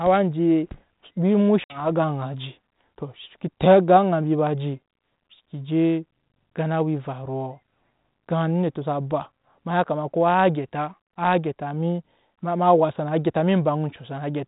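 From 1.64 to 1.83 s the speech drops into a hard-edged silent gap, a packet loss on an ADPCM call. About 60 ms of audio is missing, roughly three packets. The receiving decoder tracks the signal by predicting each sample and adapting its step size. Losing those packets leaves its predictor and step out of line with the sender's. So when the speech resumes, it comes back with brief, slight distortion before settling.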